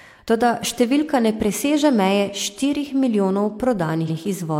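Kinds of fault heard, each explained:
Repeated frames: A roughly 93 ms stretch of the speech near 4.04 to 4.14 s is played a second time, which fits a run of two compressed frames being sent or written twice, so the decoder repeats them and the clip grows by about 93 ms. It sounds like a brief stutter. A waveform shows the same short block of speech appearing twice in a row, and a spectrogram shows an identical pattern copied side by side.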